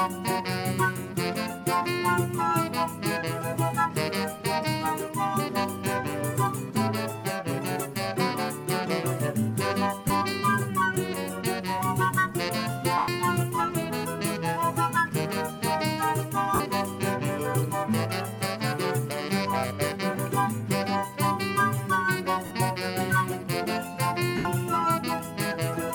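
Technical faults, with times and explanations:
10.08–10.10, 12.98–13.08, 16.55–16.60, 22.46–22.51 and 24.37–24.45 s: lost LE Audio frames. For 20 to 100 ms at each spot, the decoder fills the gaps by replaying the last spectrum with scrambled signs. That turns the sound into a brief noisy smear, and the longer dropouts start fading out.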